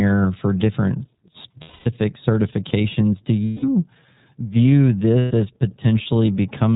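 The speech passes through the iLBC codec, apparently its 30 ms, 13.33 kbps mode, so nothing above 4 kHz survives and voicing sounds plainly rough and synthetic. Lost iLBC frames follow at 1.61–1.87 s after "for different", 3.45–3.64 s and 5.18–5.32 s: the decoder repeats the last pitch cycle with noise for 240, 180 and 120 ms, giving buzzy held vowels before instant recovery.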